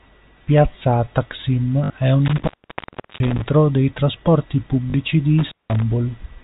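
Speech heard over a telephone-band path with nothing above 4 kHz, carrying two kinds of fault. Packet loss with the last packet repeated occurs at 1.84–1.90 s, just before "è un", and at 4.90–4.94 s, just after "dei trasporti". The 60 ms and 40 ms gaps are filled by replaying audio out of step with the pitch, giving a brief robotic stutter. The buzz fits 20 ms packets, about 50 Hz. An intermittent contact breaks the line between 2.26 and 3.42 s, after "è un" and before "dei trasporti", with the circuit open for about 0.73 s in total. It breaks again from 5.39 to 5.83 s, open for about 0.19 s. Each dropout cuts out with crackle at its edges and leaves faint hiss.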